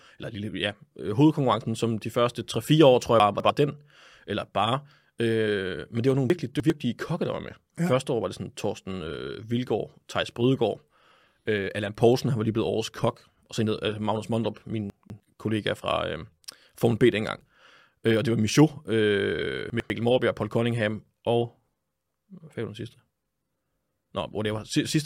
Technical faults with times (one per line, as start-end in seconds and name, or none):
3.20-3.50 chunks out of order
6.30-6.70 chunks out of order
14.90-15.20 chunks out of order
19.70-19.90 chunks out of order